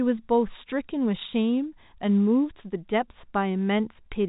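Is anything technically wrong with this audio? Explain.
No, nothing technically wrong stands out here.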